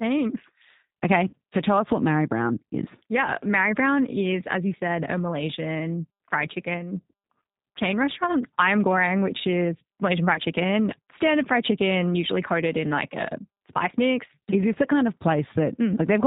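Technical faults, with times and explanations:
throughout: G.729 codec. Speech is rebuilt at 8 kbit/s from a vocal tract filter and sparse pulses, so nothing above 4 kHz passes and the sound is plainly rough and synthetic.
1.29–1.34 s and 10.34–10.40 s: VoIP packet loss concealed by the speech codec. About 40 ms, then 20 ms, went missing, which fits two packets and then one. The decoder stretched its last pitch and filter to fill the gap, fading as it went, and the speech stays weak briefly after.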